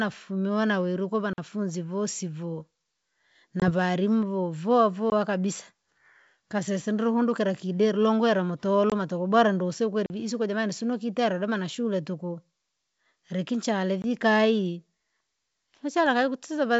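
At 1.33 to 1.38 s the speech drops out for about 49 ms, just before "vosi voo". This is a block of digital silence: likely the output buffer was not filled in time, so the samples became zeros and the sound cut off and back with no fade.

At 3.60 s a 20 ms hard-edged hole opens, and the speech comes back slightly distorted, settling by about 3.71 s. This is packet loss on an ADPCM call, with the gap fitting a single lost packet. The missing data left the decoder's predictor and step size out of step with the sender's until they re-converged.

Another block of digital silence cuts in at 5.10 to 5.12 s (20 ms).

At 8.90 to 8.93 s, between "ndru kundukila kidera longwera" and "tukubwera ndusi", the same ADPCM packet-loss pattern repeats: a 20 ms hole, then a brief disturbed recovery.

Digital silence returns at 10.06 to 10.10 s (40 ms), between "tukubwera ndusi" and "vii isiko jamani sinukitera", and at 14.02 to 14.04 s (20 ms). 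Each is heard as a short hole.

Throughout, the audio has the clear, 7 kHz-limited sound of G.722 wideband telephone coding, which fits its full 64 kbit/s mode.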